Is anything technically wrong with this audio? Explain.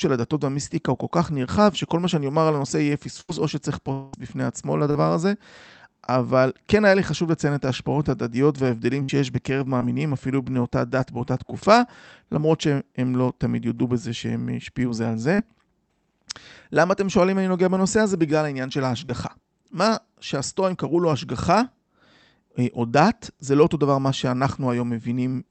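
Yes. The speech has seven audible packet-loss events of three kinds. They pass through an Opus call path whose top end stops at 8 kHz, and whose coding noise fits a bitrate of around 40 kbps.

Burst of packet loss at 3.21–3.30 s and 9.03–9.11 s. About 80 ms and 60 ms of audio went missing. The receiver stretched the last sound, fading it into a held buzz or hiss, then jumped ahead. Unlike the short concealed losses, you hear a skipped chunk, not just a blur.

Long network dropout at 3.92–4.15 s. This was likely a longer interruption in the network. About 200 ms never arrived, and the receiver filled the whole stretch by extending the last sound as a decaying buzz or hiss, never reaching true silence. The speech then resumes past the lost section. It lasts more than twice as long as the bursts, so the fade is clearly drawn out.

Short concealed packet loss at 4.91–4.97 s, 9.79–9.82 s, 15.34–15.40 s and 19.06–19.11 s. 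Only 20 to 40 ms went missing each time. The decoder continued the previous pitch or shaped noise, then blended back into the real audio. Each one is heard as a quick smear or wobble, with no sustained buzz.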